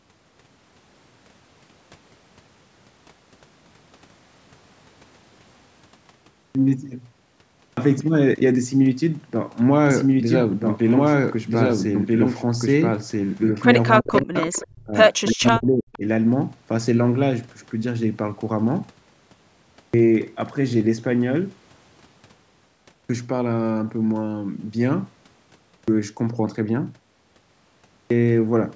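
At 6.27 s and 7.47 s there is a clipped start after a pause: the output device appears to have dropped into sleep during the silence and needed time to wake, so roughly 0.28 s and 0.30 s of each onset is lost. The sound jumps in already mid-syllable. On the waveform, the envelope rises as a vertical wall with no ramp.

From 9.90 to 13.74 s a doubled audio track runs. A second, full-band copy trails about 1.5 s behind at roughly the same level, with no reverb tail. It most likely comes from a second, slower capture path. The spectrogram shows the same harmonic patterns repeated, shifted right, beginning and ending abruptly.

Between 14.0 and 16.04 s, speech is suppressed in double talk, at 14.0–14.36 s, 14.64–14.95 s and 15.33–16.04 s. The likely cause is an echo canceller that could not tell its talker from loudspeaker echo and ducked both. The level drops by up to about 40 dB, leaving near-blank gaps in the spectrogram and collapsed waveform stretches.

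Overlapping this, an echo leak appears at 14.07–14.62 s, 15.26–15.66 s and briefly at 15.93–15.98 s. It is likely residual far-end loudspeaker pickup returned about 0.33 s late. It sits about 15 dB below the speech, with the last scrap nearer 25 dB down. It shows as faint, fragmented, time-shifted copies of the harmonic bands.

Clipped starts after a pause return at 19.65, 22.76, 25.55 and 27.77 s, each following a gap of roughly half a second to 1.2 s. Between 0.29 and 0.33 s of the onset is swallowed each time, again showing hard-edged waveform onsets.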